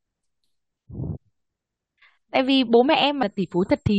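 Compressed frames skipped: twice, the decoder passed over whole frames of this speech recording, either because they were missing from the stream or rejected as corrupt. Around 1.15 to 1.17 s, roughly a third of a second of speech vanishes, and at 3.22 s about a tenth of a second goes. Each gap is a whole multiple of a frame length near 23 ms.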